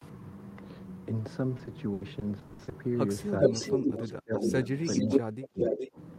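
From 1.57 to 2.73 s the sound breaks into a run of repeated packet loss, heard as a robotic, choppy stretch. Nine short holes follow one another, the longest about 80 ms. Roughly 300 ms is patched by stretching the preceding sound and another 300 ms simply drops out, so about a quarter of that span is filler. The continuation of the last sound sets this apart from clean dropouts, which would be plain silent gaps.

Echo leak starts at 3.4 s and lasts until 4.12 s. A copy of the speech returns about 0.42 s late, at roughly the level of the direct voice or a little above it. The likely cause is a far-end loudspeaker whose echo canceller let part of the microphone pickup through. It differs from room reverberation because the copy is a distinct, clearly delayed repeat, not a smooth decaying tail.

Overlapping this, the speech dips for a moment at 3.49 to 3.53 s, then sinks heavily from 3.7 to 4.53 s. 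This is speech suppressed in double talk, likely an echo canceller ducking everything while both ends are active. Unlike packet loss, the level is turned down rather than replaced with synthetic filler.

The echo returns at the same delay from 4.33 to 4.67 s and from 4.83 to 5.2 s. From 5.04 to 5.97 s the voice is cut very deeply again, and another echo burst sits inside that stretch at 5.59 to 5.89 s.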